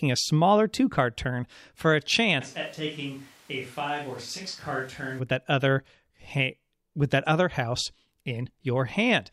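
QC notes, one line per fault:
2.43–5.18 s, switch to a distant microphone: speech abruptly goes hollow, roomy and about 10 dB quieter, likely a farther mic; the waveform steps down, and the spectrogram loses bass as the noise floor rises.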